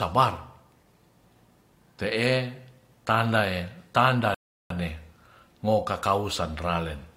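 Rebuffering stall in this speech clip, 4.34 to 4.70 s: the player exhausted its downloaded audio, went silent, then resumed exactly where it stopped, adding 0.36 s without losing anything.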